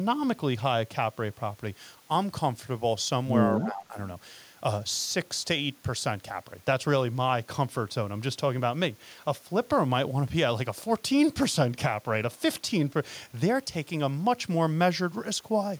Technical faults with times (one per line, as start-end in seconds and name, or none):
3.53-3.97 speech suppressed in double talk